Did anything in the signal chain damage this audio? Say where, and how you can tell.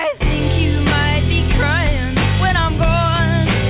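No, the signal chain hasn't damaged this audio; it carries only the expected character of the call path, with nothing above 4 kHz, which fits a narrowband telephone codec such as G.711.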